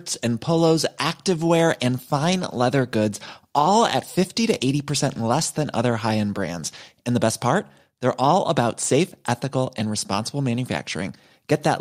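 No audible technical faults.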